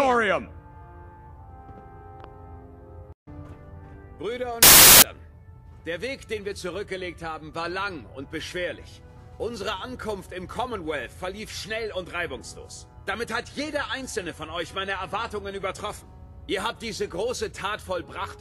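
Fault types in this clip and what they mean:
Samples built from the wrong bytes: from 4.63 to 5.02 s the reader assembles each sample's bytes in the wrong order or offset, so rapidly changing low bits dominate and the sound turns into loud, harsh broadband noise.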